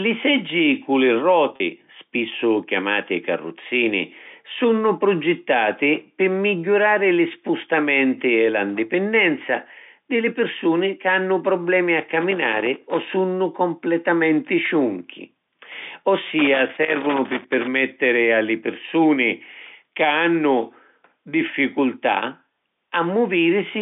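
Packet loss with pitch repetition occurs at 1.56 to 1.60 s. About 40 ms of speech went missing, which fits two 20 ms packets. The receiver filled the gap by replaying the last pitch period, so the speech briefly sounds held and buzzy.

Loose connector crackle appears at 12.21 to 13.12 s and again at 16.39 to 17.67 s. A worn or dirty contact was making and breaking rapidly, chopping the signal, heard as irregular bursts of scratchy crackle over the narrow telephone-band speech.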